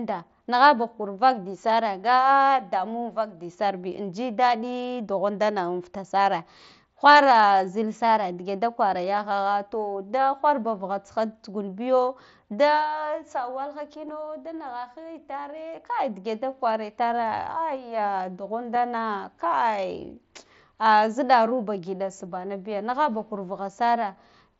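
Speech carried over a Bluetooth headset link with the wideband mSBC codec. Concealed Bluetooth headset packet loss occurs at 3.82, 14.08 and 18.75 s. Each time, a 7.5 ms packet dropped, and the receiver patched it from recent waveform, leaving only faint blips.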